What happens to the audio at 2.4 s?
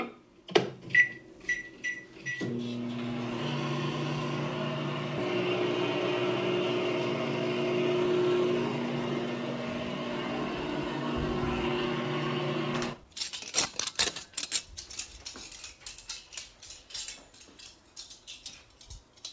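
Nothing goes wrong at 2.4 s: the sound carries straight through the WebRTC call path with no dropout, glitch or distortion, and only the G.722 codec's usual coding noise and its limit of nothing above 8 kHz shape it.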